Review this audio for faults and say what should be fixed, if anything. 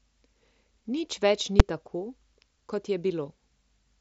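At 1.60 s the speech is hit by a single loud bang: invalid numbers at full scale, where a calculation produced infinite or invalid values that were clamped to maximum output for one short block, consistent with a 256-sample buffer. Above 7.7 kHz the band is empty, which fits the mSBC headset codec. To prevent the bang, check the processing for NaN and infinity, and clear or mute any affected block before it reaches the output.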